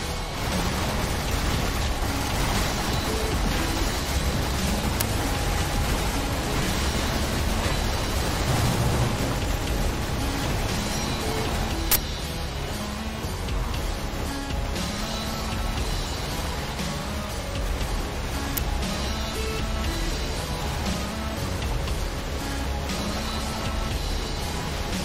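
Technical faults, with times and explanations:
5.00 s, 11.92 to 11.96 s and 18.57 s: uninitialised buffer. Three short, loud events occur where a block was played before any audio was written to it, so leftover memory came out as samples. The two 10.7 ms cracks fit a 512-sample buffer, and the 42.7 ms burst of digital noise fits a 2048-sample buffer.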